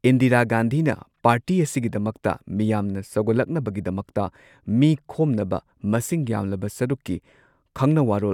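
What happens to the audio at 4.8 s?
Nothing goes wrong at 4.8 s: the speech plays through intact, with no dropout, click or glitch.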